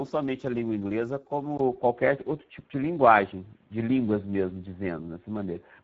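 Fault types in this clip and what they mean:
Speex codec: Speex is a CELP speech codec from older VoIP and game chat. It builds speech from a coarse model and a small budget of excitation bits. Here the damage is plainly audible. The speech sounds hoarse and grainy, with a rough, buzzy edge. The lack of detail points to a low setting of roughly 10 kbps. Nothing reaches above 7.7 kHz. The top of the band sounds like thin, shaped noise rather than real detail.
Input switched to a poorer device: At 1.57 s there is a short gap of about 20 ms. After it, the speech turns dull and boxy until the end of the clip. Nothing now reaches above 3.8 kHz, so the brightness is gone. The level shifts by a few decibels. A new, faint background noise appears, well below the speech. The likely cause is the system changing its input mid-recording to a narrower-band microphone or a headset's call profile.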